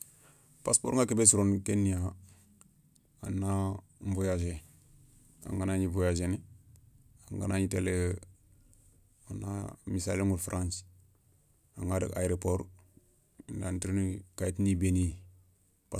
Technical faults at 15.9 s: none

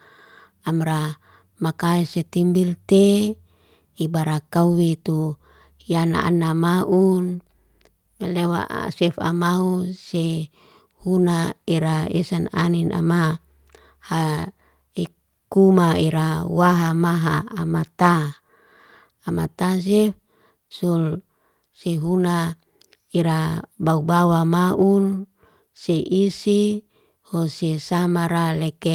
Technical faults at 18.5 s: none

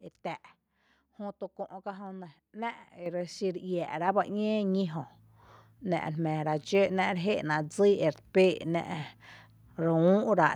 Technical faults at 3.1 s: microphone volume stepped up

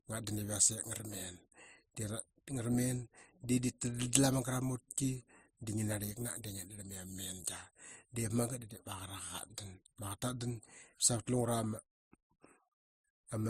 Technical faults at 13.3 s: transcoding between lossy codecs

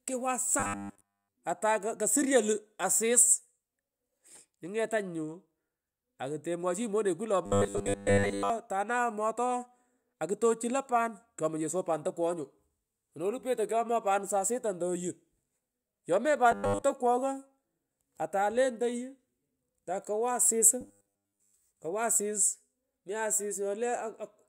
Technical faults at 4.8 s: none

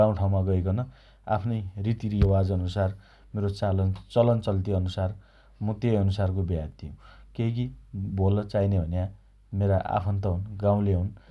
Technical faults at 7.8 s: none

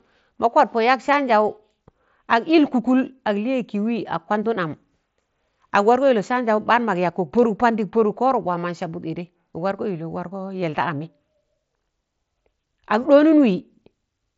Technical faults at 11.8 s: none

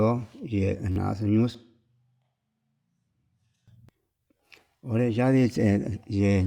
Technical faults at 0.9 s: repeated buffer

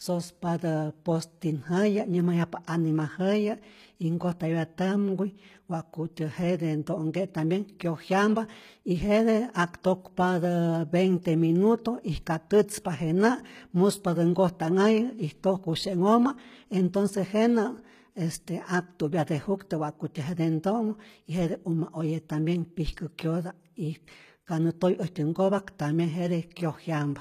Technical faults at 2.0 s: HE-AAC compression

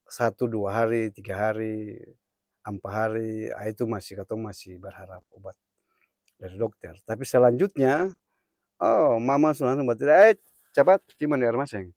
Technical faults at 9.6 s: scattered short gaps

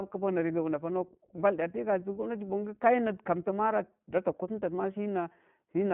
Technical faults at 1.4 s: iLBC codec

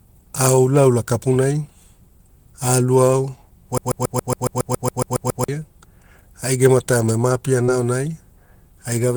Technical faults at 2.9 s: none

